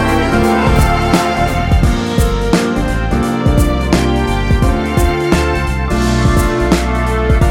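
Nothing here sounds off; the audio runs along smoothly the whole way, with no technical trouble turning up anywhere.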